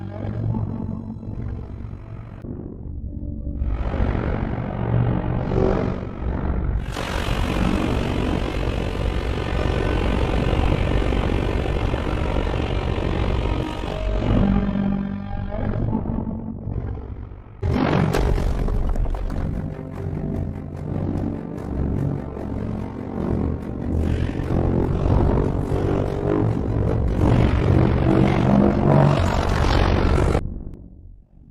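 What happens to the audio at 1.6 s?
At 1.6 s the audio carries overlap-add ripple, present from start to finish rather than at that moment alone. The sound was split into windowed frames and rejoined with overlaps that don't sum to a steady gain, so the level dips and swells by about 11 dB once per frame, around 50 times a second. The result is a rough flutter. Unlike mains hum, it adds no steady tone independent of the audio. It modulates the existing sound, adding side tones around each note.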